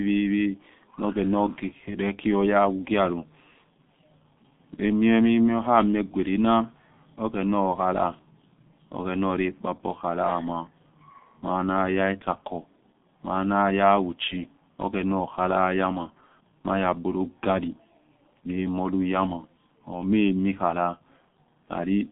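From start to end the speech carries G.723.1 codec damage, and it is heavy. The band runs only from about 150 Hz to 3.7 kHz, so the low body and the upper air are gone, leaving a muffled telephone sound. The coarse coding, which fits a rate near 6.3 kbit/s, and the slow, frame-by-frame update of the voice model make the voicing hoarse and smear consonants into one another.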